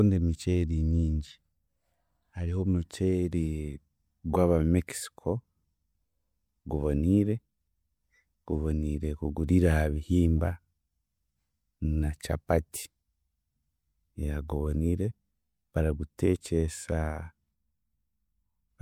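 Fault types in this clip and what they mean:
Pre-echo: a short hiss arrives just before a sharp attack at 16.18 s, about 11 ms early. The codec spread its quantisation noise across the whole transform block, so noise meant for the loud onset leaks into the silence before it. The attack sounds softened.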